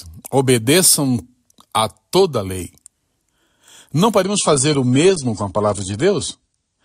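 At 4.22 s the speech abruptly turns duller, with nothing above 10 kHz and more codec artefacts, and it stays that way to the end of the clip with no gap at the switch. This is an adaptive stream at a lower bitrate: the player swapped to a leaner encoding mid-playback, which fits a step down from about 96 kbit/s to 32 kbit/s AAC, trading treble for continuity.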